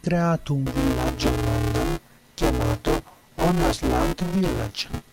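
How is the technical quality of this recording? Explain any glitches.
The recording is marred by a persistent fault. From 0.66 s to the end, a robotic 188 Hz buzz rides the speech. This is buffer tearing: writer and reader slipped, so roughly half of each period, fitting a 256-sample buffer, replays audio about ten milliseconds old.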